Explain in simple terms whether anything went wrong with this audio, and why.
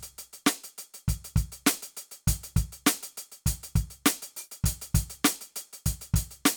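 Nothing went wrong with this music recording that a listener would notice.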